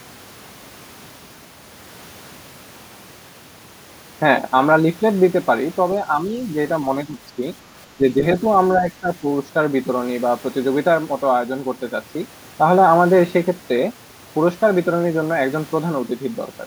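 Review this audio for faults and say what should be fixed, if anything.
The speech dips briefly at 7.05–7.41, 7.97–8.24 and 8.81–9.25 s, by around 10 dB, deeper on the last. It's likely speech suppressed in double talk, with the echo canceller ducking the talker while the far side spoke. A better double-talk detector, or gentler suppression in the canceller, should keep this from happening.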